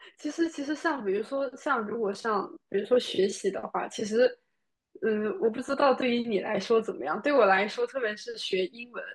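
No audible technical faults present.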